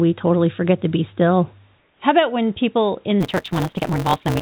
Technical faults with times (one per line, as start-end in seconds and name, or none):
1.79-2.00 comfort noise in place of the background
3.20-4.41 block size mismatch (truncated)